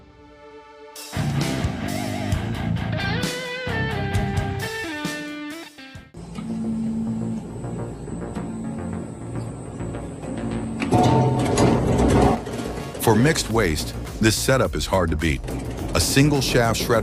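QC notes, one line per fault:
9.46 s, compressed frames skipped: the audio jumps ahead by roughly 150 ms, which fits about four 32 ms frames going missing. Nothing is silenced, unlike a dropout.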